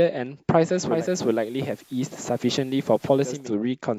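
Digital radio blending to analogue runs from 0.80 s to 3.52 s in this speech clip. The receiver lost its digital stream and cross-faded over about 0.32 s to the station's FM broadcast, bringing hiss roughly 30 dB below the signal and a level drop of about 1 dB, before blending back.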